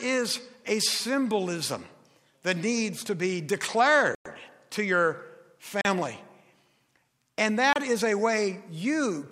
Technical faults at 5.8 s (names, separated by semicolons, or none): Bluetooth stall